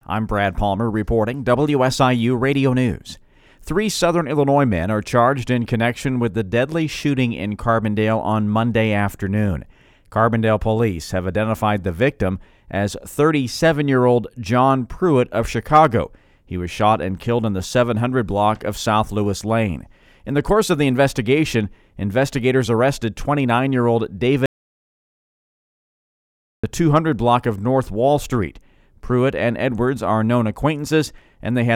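At 24.46 s, right after "year old", there's an audio dropout to silence: about 2.2 s of dead air with no room tone until 26.64 s. That's likely a lost input.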